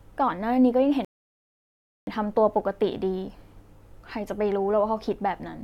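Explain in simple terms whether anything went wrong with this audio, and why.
At 1.05 seconds the speech suddenly drops into silence for about one second, then picks up again at 2.07 seconds exactly where it stopped. This is a rebuffering stall: the player ran out of downloaded audio and waited for more, adding time without losing anything.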